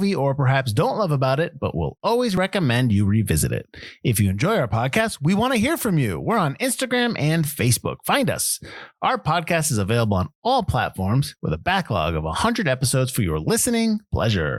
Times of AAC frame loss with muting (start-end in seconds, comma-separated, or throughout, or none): none